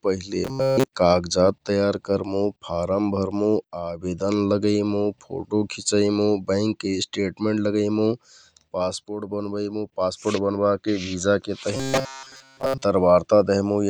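From 0.45 to 0.89 s, just before "काजजात तयार करमुँ", and again from 11.77 to 12.82 s, the speech turns into a robotic sound, likely from repeated short buffers. About 7.5 ms loops replace most of the real audio, imposing a rigid 134 Hz metallic buzz that, unlike a stutter or dropout, keeps one fixed pitch.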